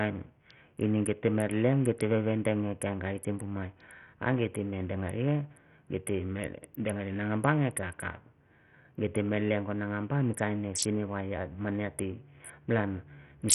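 From start to finish the speech is band-limited, with nothing above about 16.1 kHz, gritty quantisation noise and flickering, partly missing treble. This is likely Bluetooth SBC compression at a starved bit pool, around 48 kbps, where the upper sub-bands lose their bits.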